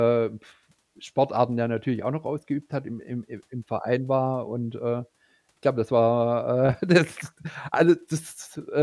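Listening to this speech recording, nothing technically amiss stood out at any point.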